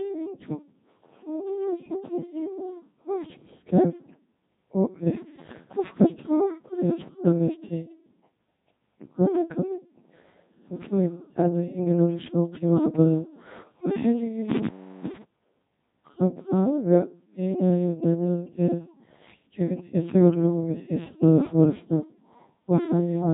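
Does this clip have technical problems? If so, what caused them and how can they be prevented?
Yes. Codec 2 vocoder processing runs throughout. The speech is rebuilt from sine waves, sounding robotic and buzzy with nothing above 3.7 kHz, consistent with roughly 2.4 kbit/s. Prevent it by sending the audio over a higher-bitrate waveform codec.

An intermittent contact occurs from 14.50 to 15.23 s. A loose connection opens for about 0.36 s, cutting the sound with crackle at each edge. Prevent it by reseating or replacing the cable and securing the plugs.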